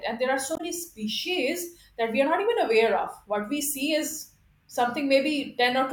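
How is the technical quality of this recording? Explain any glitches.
A single glitch interrupts the speech: a short disturbance from 0.54 to 0.61 s, between "there are" and "species that we are". It is a brief break in the otherwise continuous speech. This is damaged data in a compressed stream. Corrupted bytes at that point made the decoder misread the frames, lose its place, and hunt for the next valid frame header.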